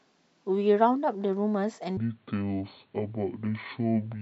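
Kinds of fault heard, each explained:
Section at the wrong speed: from 1.97 s to the end of the speech, playback runs at 0.58 times the recorded rate, likely because that stretch was fitted to the wrong clock. Speed and pitch fall together in one sudden step, the voice dropping about ten semitones and slowing markedly. Unlike time-stretching, the timing is not altered on its own, and unlike a pitch shift, the pitch does not change while the pace holds; both move together.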